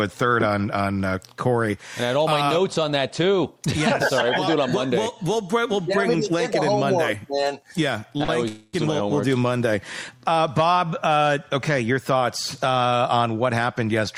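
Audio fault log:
8.17 to 8.30 s and 10.17 to 10.34 s, short stall from a late packet: three times a packet was not there when it was due, the jitter buffer ran dry, and the receiver held the last sound for about 21 ms, 47 ms and 32 ms before carrying on from the same point. Nothing is lost, but each held sound drags on with a faint buzz or dip. On a spectrogram each stretch shows as frozen horizontal bands, and the waveform repeats a short period.
8.48 to 8.75 s, call audio freeze: the sound stops moving for about 250 ms, continued as a fading buzz or hiss rather than going silent, and then resumes exactly where it left off, so the later audio runs a quarter second late with nothing missing. The likely cause is packets held up in transit that emptied the jitter buffer. A spectrogram shows a smeared, static block decaying in level, and the waveform shows a repeating, shrinking pattern.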